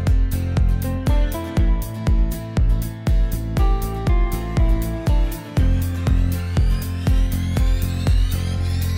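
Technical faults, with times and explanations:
No technical faults can be heard anywhere in the clip. There is nothing in the sound that calls for a time or an explanation.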